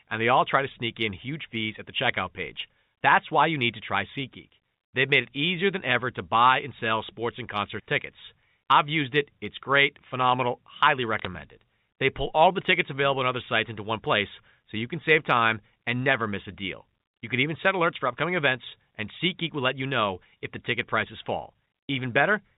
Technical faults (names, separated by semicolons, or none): bit errors on a digital phone line